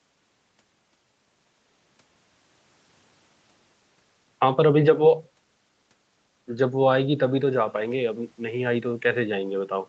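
Speech carried over a call path with microphone processing and an Opus-style codec, band-limited to about 8 kHz as such a link normally is, and no faults present.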